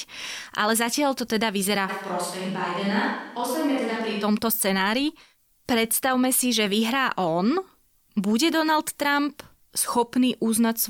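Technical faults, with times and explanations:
1.90 to 4.22 s, switch to a distant microphone: the close microphone's feed likely dropped out, leaving only a pickup much further from the talker. The speech abruptly turns roomy and hollow, with thinner low end, and drops by around 5 dB, because the distant capsule hears more reflections and less direct sound. Room noise rises to roughly 30 dB below the speech, and the close, fuller sound snaps back just as suddenly at 4.22 s.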